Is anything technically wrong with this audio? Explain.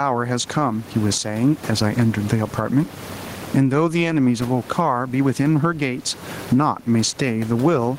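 Yes. Gain pumping runs through the whole clip: the input gain is likely set far too high, with a fast limiter clamping it down on each loud syllable. The room noise sits about 29 dB below the speech, and the gain swings by around 20 dB, leaving the speech squashed.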